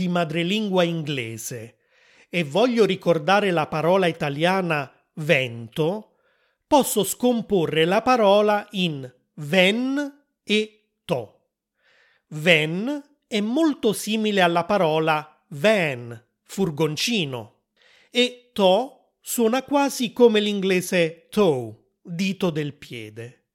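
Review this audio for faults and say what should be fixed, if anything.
Nothing here needs fixing; no faults are audible.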